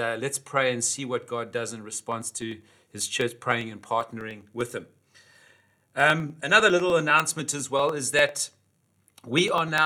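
From 2.02 s, after "does in", to 9.78 s, regular ticks sound every 0.0995 s: periodic USB or driver dropouts, each skipping roughly half a millisecond.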